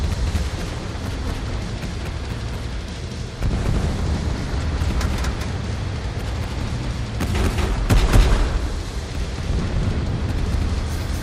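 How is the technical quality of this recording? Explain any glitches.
The recording carries a doubled audio track from start to finish. The likely cause is that the signal was captured twice, once through a slower path, or that an edit left two copies out of step, so a second full-band copy trails the first by about a fifth of a second at roughly equal level. The result is a hard, flat repeat of every sound, with no decay or room colour, which smears transients and makes the audio sound stuttered rather than reverberant.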